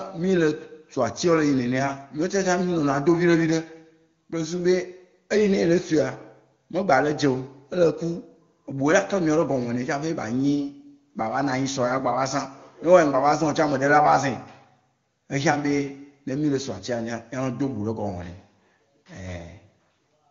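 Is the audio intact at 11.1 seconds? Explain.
Yes, the audio is intact at 11.1 seconds, with the speech passing cleanly through the AMR wideband (HD Voice) codec at its 23.85 kbit/s rate and no fault at that moment.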